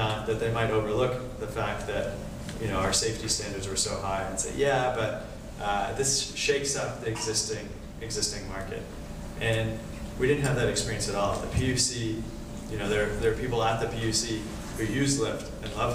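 Nothing in the audio stood out as a technical fault on listening.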